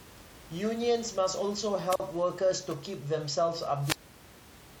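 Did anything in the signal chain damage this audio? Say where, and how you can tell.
Yes. The wireless microphone's FM radio link faded twice, and the receiver's squelch muted its output each time: a wireless microphone squelch dropout. Hiss rises, then near silence lasting 43 ms (1.88–2.00 s) and 451 ms (3.81–4.37 s), before speech resumes.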